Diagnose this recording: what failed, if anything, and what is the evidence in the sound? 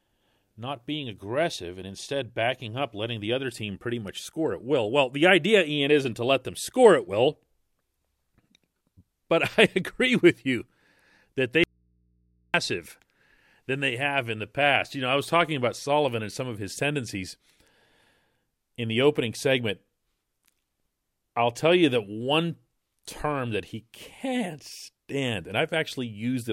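At 11.64 s the speech cuts out abruptly and returns just as abruptly at 12.54 s, leaving a gap of about 0.9 s that holds only mains hum, roughly 40 dB below the speech level. This is an audio dropout to a faint residue. The hum in place of silence points to the analogue wiring stage: the likely cause is an intermittent connection that briefly left the input open, so the live path after the break picked up hum instead of the signal.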